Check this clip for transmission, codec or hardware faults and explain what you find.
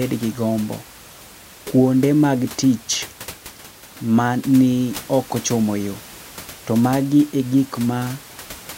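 Nothing here points to a transmission, codec or hardware problem; the only thing underneath the speech is a bit of room noise sitting about 20 dB below it, which belongs to the recording space rather than the system.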